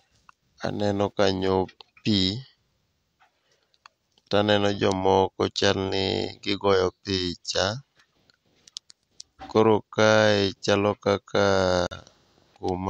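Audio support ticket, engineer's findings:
Silent gap in speech, 11.87 to 11.91 s, right after "chalo kaka". About 44 ms missing. Likely Bluetooth dropout on the wireless link: late packets discarded, roughly three. Playback resumes further on, as if running through the gap.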